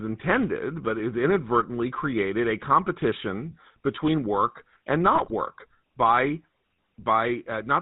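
Throughout, the speech carries the buzzy, gravelly roughness of the GSM full-rate codec, with nothing above 4 kHz. Unlike plain low-pass filtering, the pulse-driven vocal-tract model adds a coarse rasp to the voice. From 5.15 to 5.33 s, GSM bit errors corrupt the decoder's filter, pitch and gain values, causing squawks, pops and gargling. These sound unlike dropouts because the sound distorts and swells instead of going silent.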